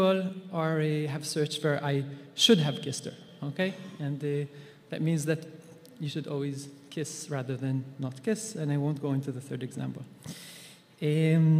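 Sample clock jitter runs throughout: the converter clock wanders by a few microseconds, adding a hiss roughly 35 dB below the signal that grows on loud, bright passages.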